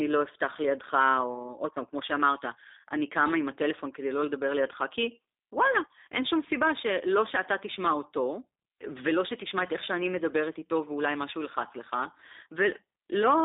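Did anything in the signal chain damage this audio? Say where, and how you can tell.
Yes. G.729 codec damage runs through the whole clip, introduced at the codec stage. Nothing above 3.7 kHz or below 300 Hz survives, so the speech has a narrow telephone-line band. It also carries a plainly audible rough, synthetic edge. That texture comes from the coder discarding the actual waveform and rebuilding each 10 ms frame from a vocal tract filter, a pitch predictor and a few pulses, which fits an 8 kbit/s G.729A stream.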